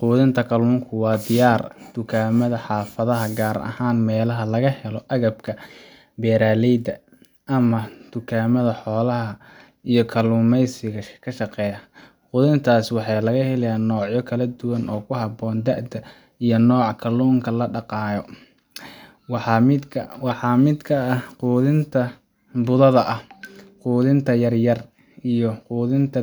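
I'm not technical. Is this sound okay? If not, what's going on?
Yes, nothing wrong here.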